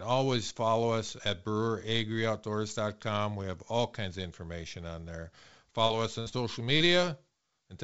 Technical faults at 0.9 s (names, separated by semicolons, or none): none